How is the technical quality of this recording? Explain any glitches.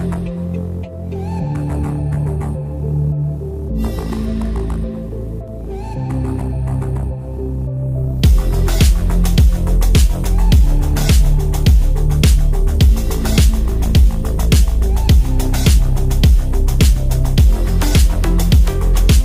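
No glitches or faults heard.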